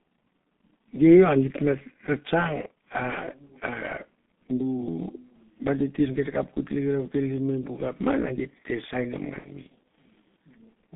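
From start to finish the speech carries G.723.1 codec damage, and it is heavy. The band sits between roughly 200 Hz and 3.5 kHz, so the voice sounds muffled and thin, and the coarse, slow-updating voice model gives it a hoarse, smeared texture that blurs consonants. The density of the artefacts fits the 6.3 kbit/s mode. A spectrogram shows a hard ceiling near 3.5 kHz, an empty floor below 200 Hz, and blocky, poorly resolved harmonics.

At 9.38 s to 9.52 s comes VoIP packet loss concealed by the speech codec. About 60 ms of audio went missing, which fits two lost 30 ms frames. The decoder filled the gap by repeating its last pitch and filter with falling gain, so the sound stretches into a buzzy tone or a coloured noise that fades, and the voice stays weak for a short while after packets return. The waveform shows a smooth decaying envelope with no fresh onsets, and the spectrogram shows a frozen, unchanging spectrum.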